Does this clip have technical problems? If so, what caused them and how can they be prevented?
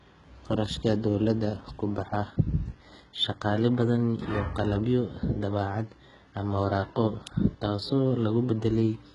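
Yes. Throughout the speech there is heavy HE-AAC compression damage, likely from encoding at a very low bitrate around 12 kbps. Only the lower band carries real detail; the treble is rebuilt by copying lower bands upward, so s sounds come out gritty, lispy and metallic, with harmonics that fail to line up across the crossover. A spectrogram shows nothing above 11.1 kHz and repeated, smeared texture in the upper band. Encoding at a higher bitrate, or with plain AAC or Opus, would prevent this.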